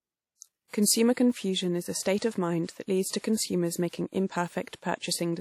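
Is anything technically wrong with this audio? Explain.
Yes. Throughout the speech there is plainly audible codec damage, likely from WMA compression. Nothing reaches above 18 kHz. Quantisation noise smears across long transform blocks, giving a ringing, washy sound and hiss that breathes with the speech, which fits a low bitrate near 48 kbps.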